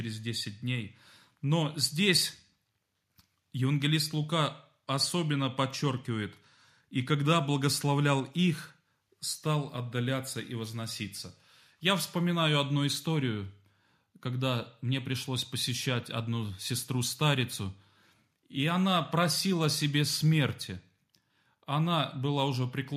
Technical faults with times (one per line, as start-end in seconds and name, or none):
none